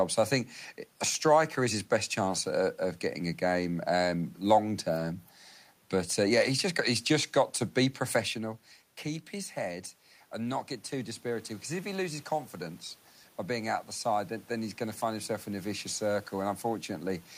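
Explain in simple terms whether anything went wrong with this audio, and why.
Automatic gain rising happens twice, at 8.19–12.88 s and 13.48–17.28 s. The level control slowly turns things up, so the voice and room noise swell together.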